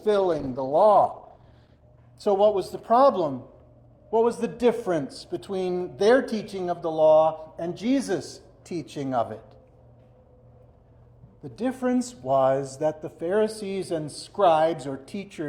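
For the first 2.0 s the adaptive stream is starting at a low bitrate: the treble sounds thin or synthetic and codec smearing is stronger, which fits Opus at around 16 kbit/s. Then it jumps cleanly, with no gap, to something like 64 kbit/s once the player has measured the connection.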